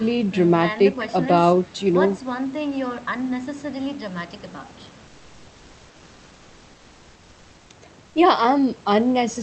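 From 8.07 to 8.15 s, a pause lasting just 80 ms, there's comfort noise in place of the background. The real room noise, sitting about 34 dB below the loudest parts, briefly gives way to a flat, featureless hiss about 2 dB quieter. It's likely the sender's discontinuous transmission kicking in during a gap, which fits Opus DTX, with the receiver filling the gap with synthetic noise until the signal resumes. The call path cuts off everything above 8 kHz throughout.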